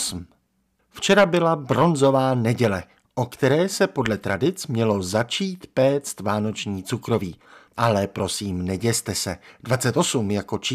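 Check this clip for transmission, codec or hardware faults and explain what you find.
Nothing audible points to a transmission, codec or hardware fault anywhere in the speech recording.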